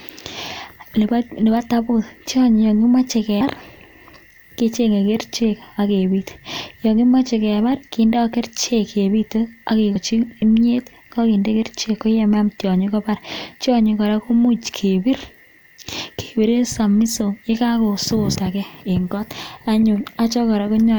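At 3.40 s, 9.95 s and 18.35 s the speech jumps forward. These are compressed frames skipped. Whole coded frames never reach the output, either missing or rejected by the decoder. At the first two points roughly a tenth of a second of sound is gone, which points to about five frames. At 18.35 s the gap is shorter, closer to 70 ms.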